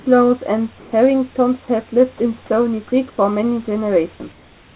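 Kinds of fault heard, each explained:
Comfort noise in place of the background: at 0.78–0.92 s, 3.1–3.18 s and from 4.32 s to the end, the room background turns into a steady, featureless hiss, level or about 2 dB quieter, likely generated at the receiver during paused transmission. Spectrogram: smooth uniform band; waveform: flat envelope.
Sound dropped by the voice detector: right after "have lived", from 2.18 to 2.20 s, 20 ms of sound is lost, likely cut as background by the sender's detector and filled with steady noise. The waveform shows a brief low-level gap; the spectrogram a short smooth patch.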